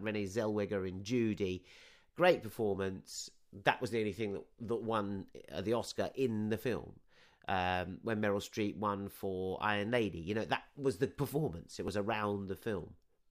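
At 11.88 s the sound lurches forward with no gap where a tiny slice should be. Roughly 5 ms of audio is missing, too short to take a whole syllable but enough to snap the waveform. This is most likely a dropped buffer (overrun): the recording software fell behind, the hardware wrote fresh samples over ones not yet collected, and the audio on either side was butted together directly.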